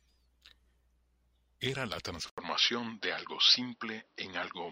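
Input switched to a poorer device at 2.30 s in this speech clip: after an 80 ms gap, the sound turns duller, with nothing above 5.8 kHz, a level shift of about 5 dB and a faint new noise floor, likely a change of input device.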